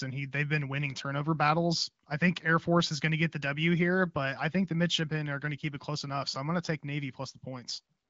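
No technical faults can be heard anywhere in this speech.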